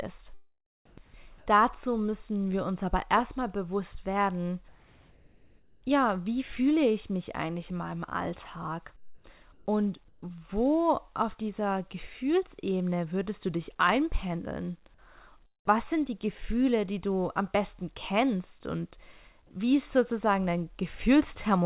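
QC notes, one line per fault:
0.86 to 0.98 s, sound dropped by the voice detector: roughly a tenth of a second of real speech just before "dazu müssen wir uns" gets eaten and replaced by about 120 ms of flat, even hiss. The likely cause is the sender's voice detector treating that quiet bit as background and cutting transmission, so the far end filled the gap with generated noise until the detector picked the speech back up.
1.38 to 1.46 s, 4.68 to 5.82 s, 8.96 to 9.24 s, 9.52 to 9.66 s and 10.08 to 10.22 s, comfort noise in place of the background: in these pauses the room tone, which sits about 32 to 38 dB under the loud parts, turns into a smooth, detail-free hiss. The first run comes right before "dazu müssen wir uns" and the last right before "wo auf dieser". The hiss level jumps by about 5, 4, −3, 4 and 2 dB respectively. That's likely discontinuous transmission, with the sender going quiet in the gaps and the receiver synthesising rough background noise. 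The whole thing runs through a narrowband call path with nothing above 4 kHz.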